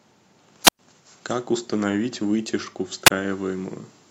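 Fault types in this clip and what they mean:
Wireless microphone squelch dropout: The radio link from an analogue FM microphone fades. The receiver's squelch then shuts the output off rather than pass static. Here the speech drops into near silence twice. The first hole runs from 0.65 to 0.79 s, with about 107 ms fully muted. The second, from 3.05 to 3.10 s, is shorter, with about 25 ms muted. Each time the speech comes straight back once the signal recovers.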